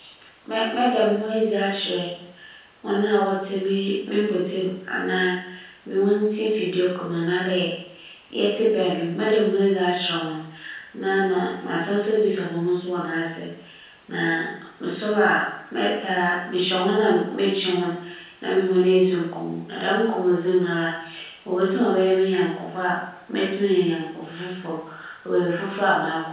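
No faults turn up anywhere in the speech; the audio stops at 4 kHz, which fits a narrowband call path such as G.711 A-law at 64 kbps working as designed.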